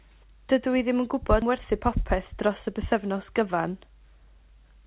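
Speech heard over a narrowband call path, with nothing above 4 kHz and the usual coding noise that fits G.711 A-law at 64 kbps, suffers a skip ahead at 1.42 to 1.44 s. Around 0.7 s of audio is simply gone, and the two sides are butted together with no fill, so the speech lurches forward mid-flow. On a waveform the envelope changes abruptly at the join. On a spectrogram the harmonic tracks break and restart, with no silent gap between them. From 1.52 to 3.49 s a jitter buffer speed-up follows. The buffer was holding more audio than it wanted, so the receiver repeatedly trimmed pitch-period-sized slices, removing roughly a tenth of a second in total. The speech plays about 4% faster at unchanged pitch. A spectrogram shows harmonics at normal spacing but syllables packed marginally closer.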